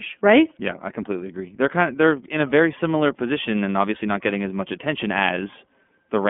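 Speech runs through the iLBC codec from start to finish. Nothing above 3.6 kHz survives, and the band sits near 200 Hz to 3.4 kHz. Plainly audible coding damage adds roughness. The sound fits 30 ms frames at 13.33 kbps.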